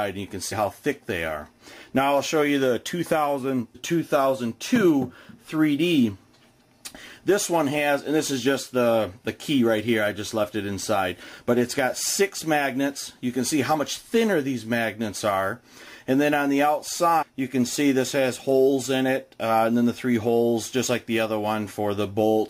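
Brief glitches cut into the audio three times: from 0.51 to 0.53 s, at 3.74 s, and from 17.21 to 17.23 s, each lasting only around 20 ms. These are damaged data in a compressed stream. Some bytes of the encoded file were lost or corrupted, so the decoder misread those frames, lost its place in the stream and produced a short squawk or blip until it found the next valid frame header and locked back on.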